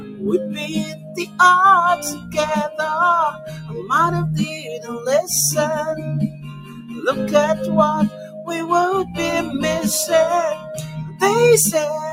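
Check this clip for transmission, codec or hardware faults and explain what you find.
A speech-tuned noise suppressor has been left running on this sound, and it clamps down hard in eight places.

Throughout the clip the level pumps and flutters, with held material sinking and tails thinning while sharp onsets punch through. The swing between kept and suppressed passages is somewhere around 15 dB. A noise suppressor applied to music or sounds like this treats anything steady, ambient or reverberant as noise to be removed. It keeps re-deciding what to cut, which produces the unstable, breathing character.

The worst moments are where the suppressor turns the sound down furthest:
0.00–0.24 s, dropping about 11 dB
0.43–1.39 s, about 13 dB
2.13–2.37 s, about 12 dB
3.32–3.90 s, about 10 dB
4.54–4.90 s, about 6 dB
6.28–7.00 s, about 12 dB
8.09–8.48 s, about 9 dB
10.58–11.21 s, about 13 dB

In each of these, the sustained part sags or its decay is chopped short, leaving hollow gaps after the attacks. 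In those stretches the suppressor judged the signal to be noise and pulled it below the surrounding level.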